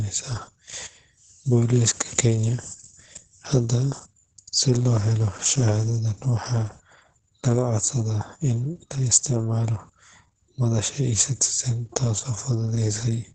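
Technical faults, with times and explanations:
Throughout: Opus voice compression. The speech is coded by the SILK linear-prediction layer alone, with nothing above 9.1 kHz, and heavily damaged by a coarsely quantised excitation. The result is muffled, hoarse and faintly robotic, which fits a low bitrate around 10 kbps.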